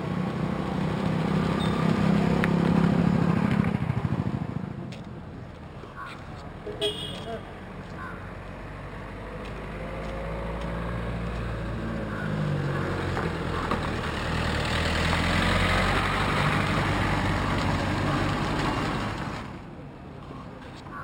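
Throughout, there's imaging from linear upsampling: a dulled top end and a faint metallic shimmer mirrored into the 6 to 12 kHz region, roughly 30 dB down, which points to 12 kHz material interpolated up to 44.1 kHz.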